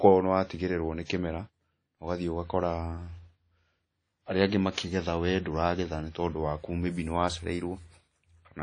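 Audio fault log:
throughout: WMA compression, likely an older WMA encoder at a low rate, something near 32 kbps. The damage is plainly audible: a washy, ringing hiss that swells and fades with the speech, and nothing above 10.1 kHz, because weak high detail got thrown away.
4.74–4.78 s: pre-echo, a brief hiss smeared about 31 ms ahead of a sharp attack, which comes through soft. The attack landed late in a transform block, so coding noise sized for it spilled into the quiet just before.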